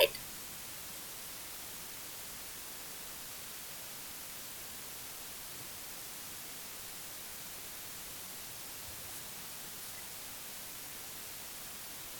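From start to finish the speech carries a constant, even hiss, the signature of low bit depth with dither. The audio has been reduced to 6 bits, and random dither was added before each sample was rounded, so the rounding error comes out as steady white noise instead of distortion. At this depth the hiss sits at roughly the same level as the speech itself, burying quieter detail without any grit or harshness.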